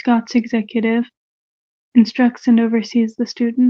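Nothing stood out on listening to this speech clip, which came through the call path as expected.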